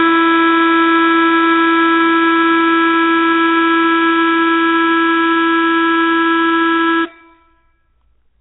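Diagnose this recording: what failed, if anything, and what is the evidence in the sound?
The failure is at the codec stage, likely Nellymoser compression. Throughout the music, nothing is heard above 3.9 kHz, and the codec damage is heavy. Weak bands get no bits and are filled with noise, which fits a 16 kbps stream.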